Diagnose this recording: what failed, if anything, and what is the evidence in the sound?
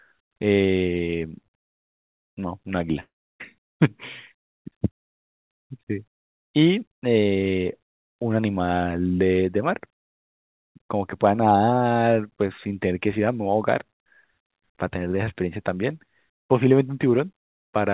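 Long network dropout, likely from a network stall: from 3.0 to 3.42 s the sound fades into a buzz, then 0.32 s of silence. Speech resumes with that stretch lost, longer than a brief concealed packet gap.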